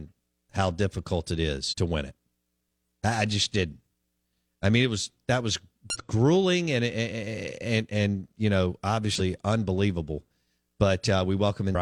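Four brief disturbances break into the speech, each a short burst of garbled sound or a momentary gap: at 1.68 to 1.74 s, between "how difficult it" and "to win it"; at 5.90 to 5.97 s, between "it was that was" and "grueling and and and"; at 9.15 to 9.21 s, just after "and and you know"; and at 11.71 to 11.75 s. Each lasts roughly 50 to 70 ms. They come from damaged data in a compressed stream, which leaves the decoder unable to read those frames properly until it resynchronises on a later frame header.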